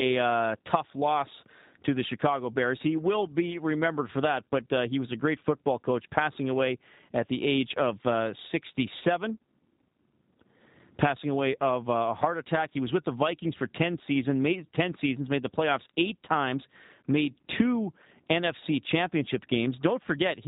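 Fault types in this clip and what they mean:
G.729 codec: The speech is carried by a low-rate voice codec that rebuilds it from a vocal tract filter, a pitch predictor and a handful of pulses per 10 ms frame, and the roughness heard throughout fits the 8 kbit/s G.729A variant. Damage is plainly audible as a buzzy, synthetic edge. A spectrogram shows nothing above 4 kHz and smeared, blocky harmonics.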